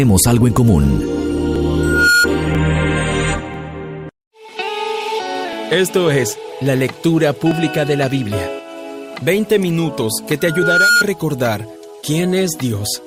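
Overlap between stream segments causes tiny skips at 0.56 s and 1.56 s, where overlapping time stamps on one-second segments make the player trim a few milliseconds, so the waveform jumps. Loudspeaker feedback squeal follows from 1.79 to 2.27 s: a 1.4 kHz tone swells over roughly a third of a second to about 5 dB above the sound as the microphone–speaker loop exceeds unity gain. The same segment-overlap skips recur at 2.55, 3.54, 5.53 and 7.51 s. The squeal returns from 10.40 to 11.04 s, again at 1.4 kHz, building over about half a second.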